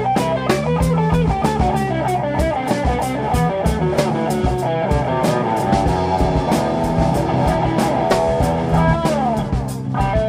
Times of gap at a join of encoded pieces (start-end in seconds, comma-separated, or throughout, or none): none